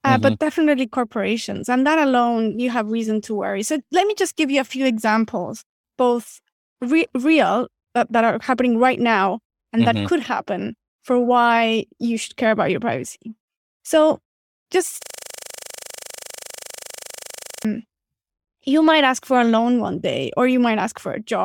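From 15.03 to 17.65 s, a system hang loop occurs: the machine froze while the sound hardware kept cycling one buffer. A single 40 ms slice of speech repeats exactly, fusing into a steady buzz at 25 Hz.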